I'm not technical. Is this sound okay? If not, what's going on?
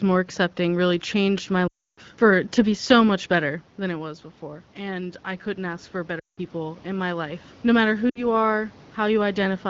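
No. There are lost AMR speech frames at 1.67 to 2.00 s, 6.19 to 6.39 s and 8.10 to 8.25 s: the phone call's signal dropped bits of speech, so the sound smears briefly and cuts out. After each gap it returns a bit rough. There's also automatic gain rising from 3.39 to 7.49 s. The voice got quieter as the talker moved back around 3.5 s, and the phone slowly turned it partly back up, with the background swelling along with it.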